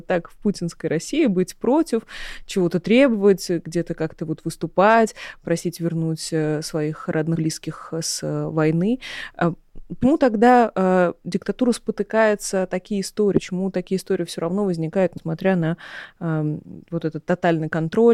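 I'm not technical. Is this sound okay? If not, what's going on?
No, there are gaps. The audio has compressed frames skipped: small chunks of the encoded file were lost or rejected by the decoder, so playback jumps ahead, dropping a fifth of a second or less each time. It happens at 7.35 to 7.40 s (after "просить вернуть э своих"), at 10.03 s, at 13.35 to 13.42 s (after "э диктатура спотыкается такие"), and at 15.17 to 15.24 s. Each jump fits 20 ms frames.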